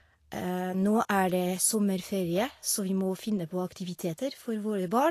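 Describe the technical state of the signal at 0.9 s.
At 0.9 s, as across the whole clip, the speech carries plainly audible Vorbis compression damage, likely from low-rate encoding that fits roughly 36 kbps. Nothing survives above 14.2 kHz, and the coarsely quantised treble turns hissy and grainy. Unlike a plain low-pass, the remaining upper band is noisy rather than clean.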